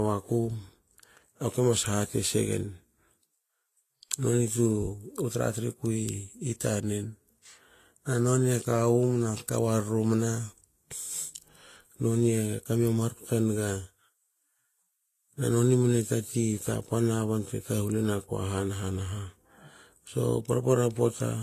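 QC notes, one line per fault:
Throughout, transcoding between lossy codecs: the speech carries two layers of coding artefacts at once, with nothing above about 14.2 kHz, which fits a chain likely running from AAC-LC into low-rate Vorbis, the second encoder spending bits re-coding the first's artefacts while adding its own.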